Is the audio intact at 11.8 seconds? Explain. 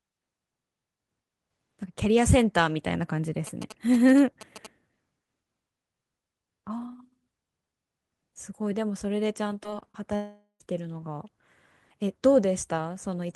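Yes, the audio at 11.8 seconds is intact, with no dropout, click, distortion or other fault at that point.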